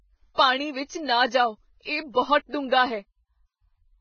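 Speech with heavy Vorbis compression throughout, likely near 13 kbps. Nothing remains above 6.6 kHz, and the treble below turns grainy and hissy rather than simply dull, as with plain low-pass filtering.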